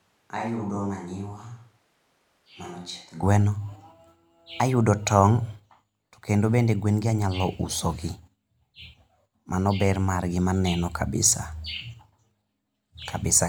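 Until 3.2 s, speech sounds roomy, hollow, thin and about 10 dB quieter. This is likely a switch to a distant microphone. Then it snaps close.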